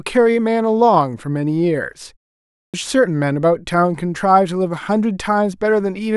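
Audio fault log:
2.51–2.74 s: clipped start after a pause. Following a gap of about 0.43 s, the output path went idle and took about 0.23 s to wake and lock again, so the speech resumes abruptly out of silence with its first sounds swallowed.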